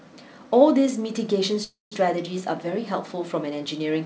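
From 1.64 to 1.94 s comes a call audio freeze, likely caused by packets stalling in transit until the jitter buffer ran dry. The last sound trails off as a fading buzz into about 170 ms of silence, then the speech resumes intact, 276 ms late.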